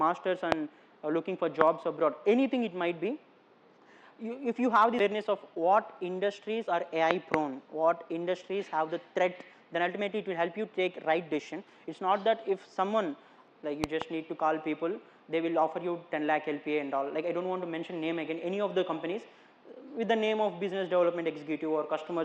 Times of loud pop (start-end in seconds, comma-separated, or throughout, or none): 0.52-0.54, 1.61-1.63, 7.11-7.36, 13.84-14.04